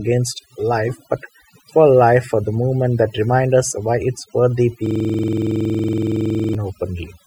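Across the whole recording the speech carries overdone noise removal. A noise reduction stage set far too aggressively has pulled individual frequency bands down or out wherever they came close to its noise estimate, taking the softer parts of the voice with them. The pauses fall to near silence dotted with twinkling, chirpy specks. On a spectrogram the background shows as a dark field scattered with isolated bright dots, and the speech harmonics look ragged, with holes bitten out of them.

From 4.86 s to 6.55 s a system hang loop takes over. The machine or its audio driver stalled while the sound hardware kept cycling through the same ring buffer, so one 46 ms slice of audio plays back exactly, about 36 times in a row. That length fits a 2048-sample buffer. Repeating at 21.5 Hz, it comes across as a rapid machine-gun stutter or coarse buzz. The waveform shows an identical short block tiled end to end, and the spectrogram shows regular vertical striping at that rate.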